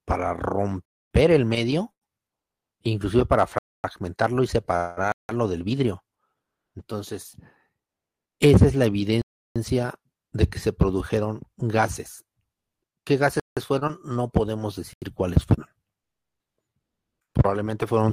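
At 0.85 to 1.11 s, 3.58 to 3.84 s, 5.12 to 5.29 s, 9.22 to 9.56 s, 13.40 to 13.57 s and 14.93 to 15.02 s the sound drops into a block of digital silence, lasting 256, 256, 171, 341, 171 and 85 ms. The output buffer likely went unfilled, and the lengths fit whole multiples of a 4096-sample block at 48 kHz. Unlike a fade or concealed packet loss, each cut drops straight to silence.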